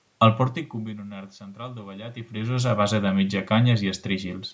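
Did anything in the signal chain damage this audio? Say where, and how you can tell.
No, nothing in the signal chain damaged this speech.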